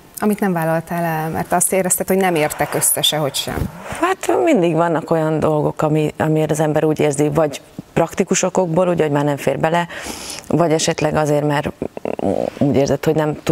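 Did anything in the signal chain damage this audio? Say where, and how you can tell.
No, nothing along the chain seems to have done any harm here; every stage from capture to playback passes the sound along without leaving a mark you can hear.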